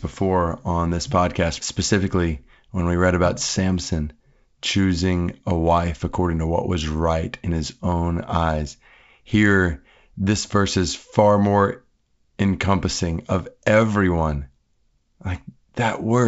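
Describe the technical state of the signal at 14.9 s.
At 14.9 s the signal is intact, with the speech passing through G.722 wideband telephone coding at 64 kbit/s and nothing faulty to be heard at that moment.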